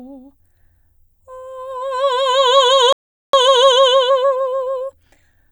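At 2.93 s the music cuts out mid-flow and stays silent until 3.33 s, a gap of about 0.41 s, before resuming where it left off. This is a playback stall. The likely cause is that the player ran out of buffered data or its output thread was held up, so nothing reached the output until it recovered. It is a clean hole in the music rather than a click or a fade.

From 3.33 s to 5.45 s the music sounds hurried, running at about 1.15 times its normal speed while keeping its pitch. This is time-compressed catch-up. After the stall, the player is working through its backlog by removing short slices of audio and cross-fading across each join. That trims the lag without raising the pitch.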